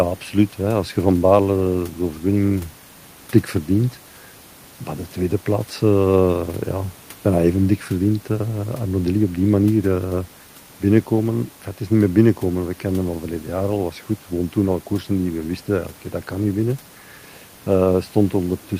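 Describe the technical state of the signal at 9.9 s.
At 9.9 s the signal is intact, with only the room's background noise sitting about 32 dB below the speech.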